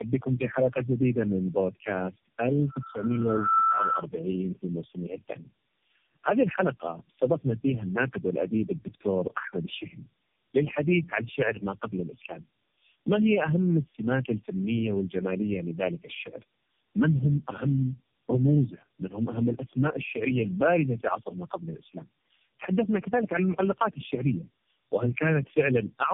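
From start to end the speech carries tandem speech coding: it sounds as though it was decoded and re-encoded several times, with each low-rate coder working on the previous coder's damage. The result is rough, muffled and warbly, which fits about four passes of narrowband AMR-NB at roughly 6 to 8 kbit/s. On a spectrogram everything stops at 3.5 kHz, and the harmonics look blotchy and smeared rather than cleanly striped.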